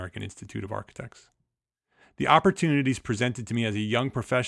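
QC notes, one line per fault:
No audible faults found.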